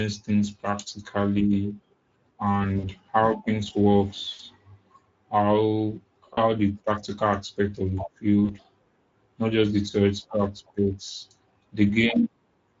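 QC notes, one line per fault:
Throughout: Speex codec. The speech carries a plainly audible hoarse, noisy graininess, which fits a mid-rate Speex setting around 16.8 kbps. At that rate the CELP coder has too few bits to model the excitation faithfully, so voiced sounds lose their clean periodic structure and pick up a rough, buzzy texture. The upper band above 4 kHz comes across as a shaped noise fill rather than real detail.
2.79–2.88 s, 4.31–4.41 s, 6.33–6.39 s, 8.45–8.53 s: VoIP packet loss concealed by the speech codec. At each point the speech smears into a brief, stretched sound that fades. The gaps fit roughly 40 ms of missing audio, about 80 ms at 4.31 s. The first ends just before "how things" and the second follows "how things". The third precedes "the practical aspect of". The decoder repeats its last pitch and filter with falling gain, and because each frame builds on the previous one, the voice stays weak or distorted briefly after the audio resumes.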